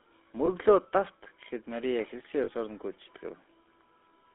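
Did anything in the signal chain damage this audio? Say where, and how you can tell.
Yes. The codec stage damaged it throughout. The speech has a buzzy, gravelly roughness, and the band runs only from about 250 Hz to 3.5 kHz. That points to the GSM full-rate codec, likely at 13 kbps. Its pulse-driven vocal-tract model throws away fine detail.

The network stage added two bursts of lost GSM frames. At 0.46 s there is a brief metallic ring lasting about 20 ms. From 2.44 to 2.51 s a longer one lasts about 40 ms. The decoder stood in for each missing frame by repeating the last good frame's settings.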